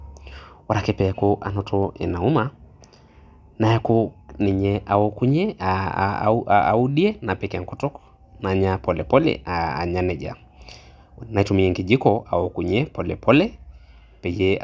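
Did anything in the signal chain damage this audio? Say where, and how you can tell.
No, nothing in the chain audibly damaged this speech.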